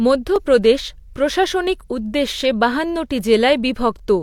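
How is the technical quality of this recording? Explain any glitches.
The recording has one glitch, a block of digital silence at 0.36 s. For about 0.67 ms the speech drops to silence and then resumes, which fits a 32-sample block of the output being left unfilled when the program missed its buffer deadline. Because the signal is cut to zero and restored with no fade, each edge is an abrupt step. At this length the two steps merge and are heard as a single brief tick rather than a hole in the speech.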